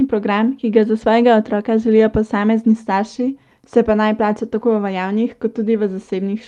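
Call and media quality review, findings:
Rough, noisy patch with no gap, 1.91 to 2.01 s, between "ga za svojega otroka" and "posamezni starši se pa". Lost packet rebuilt from error correction in the Opus decoder: about 60 ms filled from low-bitrate redundant copies carried in following packets, consistent with three separate 20 ms packets lost. Call path at 40 kbps, 12 kHz bandwidth.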